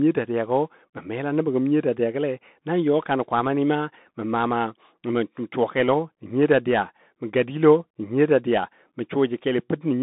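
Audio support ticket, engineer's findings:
Bluetooth CVSD headset codec, whole clip: narrowband link, sound consistent with a 64 kbps CVSD path. Nothing above 3.8 kHz, band roughly 150 Hz to 3.7 kHz. One-bit delta steps lag loud high content. Scratchy s sounds, granular hiss under speech, plainly audible.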